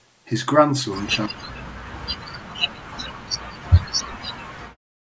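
From 1.27 to 4.41 s, and again from 4.62 s to the end, the speech sinks by around 40 dB. This is speech suppressed in double talk, likely an echo canceller mistaking the talker for loudspeaker echo while both sides spoke.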